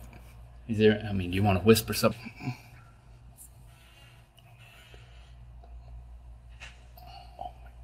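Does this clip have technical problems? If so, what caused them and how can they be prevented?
Yes. At 2.11 to 2.13 s there is a skip ahead: about a second of audio was discarded, either lost in transit or dropped by an overflowing jitter buffer while later audio was already queued, so playback leaps forward and the two sides are butted together. Unlike a dropout, no silence or fill is heard, only an abrupt jump in the content. Keeping the jitter buffer large enough to absorb bursts, rather than flushing it, prevents this.

From 2.21 to 3.68 s comes a jitter buffer speed-up. The buffer was holding more audio than its target, so the receiver trimmed short pitch-period slices again and again, about a fifth of a second in total, and the sound runs at roughly 112% speed and seems hurried. Unlike a resampling error, the pitch stays the same, and only the pace changes. Smoother network delivery, or a gentler catch-up rate spread over a longer span, prevents this.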